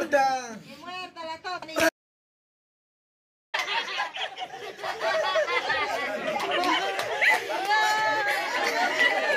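At 1.89 s the sound cuts off abruptly in mid-flow and the clip falls into dead silence, with no room tone or background hiss left underneath, until it resumes just as suddenly at 3.54 s. Whatever was playing during those 1.64 s is simply missing. This is an audio dropout to silence, most likely caused by the input being lost for a moment, through a disconnected device, a failed link or an accidental mute, while the recorder kept writing silence.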